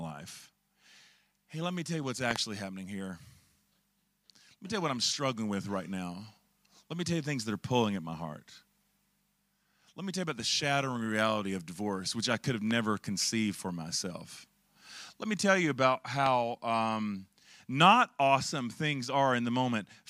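Speech interrupted by loud pops sitting well above the voice: a double pop at 2.31–2.38 s after "me tell you what's", and single ones at 12.71–12.73 s and 16.26–16.28 s, each after "which I could have" and "me tell you about", likely voltage spikes from a plug, switch or static.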